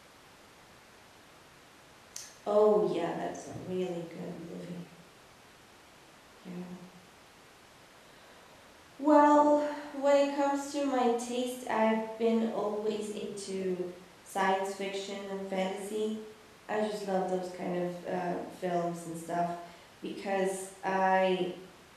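Nothing stood out as a technical problem on listening to this speech recording.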